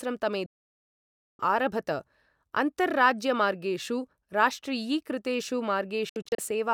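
The speech snaps to silence from 0.46 to 1.40 s, then breaks into several brief holes between 6.09 and 6.51 s, the longest 64 ms. This is digital broadcast dropout: the receiver muted whenever frames failed, and that audio is gone.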